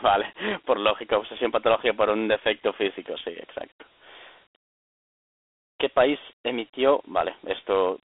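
From start to finish the speech carries the sound of Dialogic VOX ADPCM, the 4-bit adaptive coding used for phone menus and voicemail. The content sits in a telephone band of roughly 300 Hz to 3.5 kHz, with nothing above 3.8 kHz, which fits 4-bit samples at 8,000 a second, or 32 kbit/s. Coarse step-size adaptation leaves plainly audible damage: a gritty, granular hiss that rides on the speech and follows its loudness.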